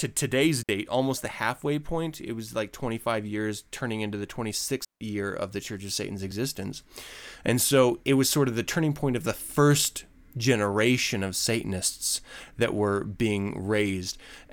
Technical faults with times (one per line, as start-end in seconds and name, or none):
0.63-0.69 digital wireless dropout
4.85-5.01 digital wireless dropout